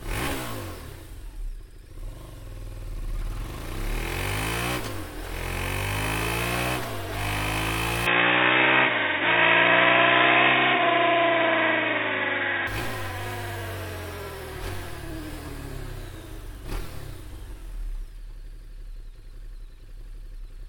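From 8.07 to 12.67 s sound turns boxy, likely an input switched to a poorer device: spectrogram empty above 3.8 kHz, waveform level shifting seamlessly.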